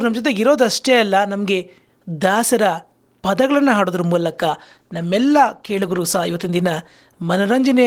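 At 4.28 s a call bitrate drop begins and runs to the end. The bandwidth estimate fell, so the encoder spent fewer bits. The speech turns coarser. This fits a fall from 32 to 16 kbps, held at its lowest for about 2.1 s. It never recovers.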